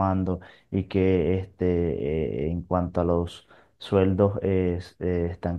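No technical faults can be heard in the recording at any point.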